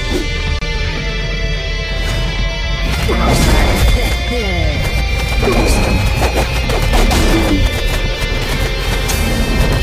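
At 0.59 s the sound drops away and resumes at 0.61 s, a gap at a join of encoded pieces about 27 ms long. Two separately encoded sections were butted together without trimming, so the encoder's start-up delay and the padding of the previous final frame both survive as silence. What distinguishes it from a network dropout is that nothing is missing: the audio picks up exactly where it left off, and the softened edges come from the codec rather than a hard cut.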